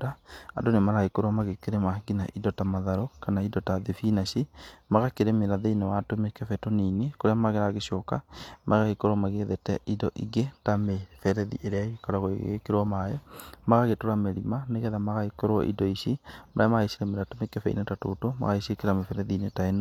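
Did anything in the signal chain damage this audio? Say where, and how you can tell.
No, nothing damaged this audio.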